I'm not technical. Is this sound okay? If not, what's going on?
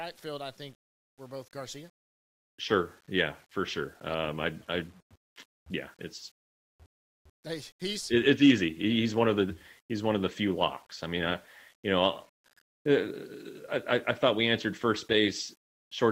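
No. Low bit depth without dither runs through the whole clip. The speech sounds grainy and rough, especially in quieter moments, with a fuzz that follows the voice. The likely cause is that each sound level was rounded to a coarse step, roughly 9 bits, with no smoothing noise added.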